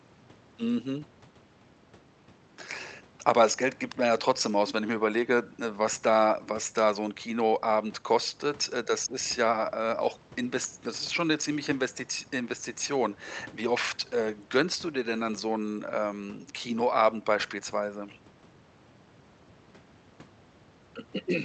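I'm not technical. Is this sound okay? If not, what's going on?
Yes, this sound is okay, and nothing is going wrong in it.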